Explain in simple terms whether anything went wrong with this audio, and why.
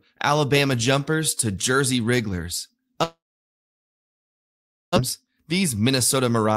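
A long network dropout runs from 3.03 to 4.98 s. The sound fades into silence, likely because packets stopped arriving, and about a second of speech is lost.

A jitter buffer speed-up follows from 6.16 to 6.53 s. The receiver trims tiny slices, about 50 ms in total, so the speech runs 12% faster at the same pitch.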